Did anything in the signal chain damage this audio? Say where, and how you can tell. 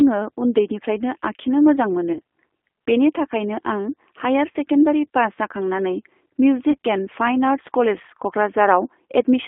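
Yes, at two stages. At the codec stage, the whole clip has been through G.729 (the G.729A variant) at 8 kbit/s. The speech sits in a telephone band of roughly 250 Hz to 3.5 kHz, with nothing above that, and has a plainly audible rough, synthetic texture. G.729 does not send the waveform. It sends a vocal tract filter, a pitch predictor and a handful of excitation pulses per 5 ms subframe, so fine detail between those pulses is lost.

At the network stage there are three short breaks, each covering about 30 ms of lost audio, which points to a single dropped packet each time. They fall at 2.13 to 2.19 s, right after "उन्दैनिफ्रायनो आखिनो मोजां", at 4.51 to 4.56 s, and at 6.71 to 6.77 s. Each one is VoIP packet loss concealed by the speech codec. With no data arriving, the decoder repeats its last pitch and filter at falling gain, so the speech smears into a brief, fading buzzy tone or coloured noise instead of dropping to silence.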